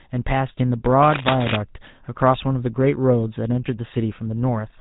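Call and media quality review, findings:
GSM full-rate codec, whole clip: buzzy, gravelly roughness on speech, plainly audible. Spectrogram shows nothing above 4 kHz and a coarse, pulse-driven excitation texture in the harmonics. Vocal-tract model fed regular pulses keeping every third excitation sample, which fits a 13 kbps GSM path.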